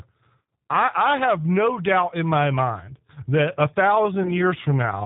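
Throughout, G.729 codec damage is plainly audible, consistent with 8 kbit/s: speech is band-limited below 4 kHz and sounds rough and synthetic. At 0.42 s, just before "I I have no", and from 4.23 to 4.42 s, after "my mind that a", VoIP packet loss concealed by the speech codec stretches the sound into a fading buzzy tone or coloured noise. The first gap is 60 ms, fitting three lost packets, and the second is 20 ms, fitting one.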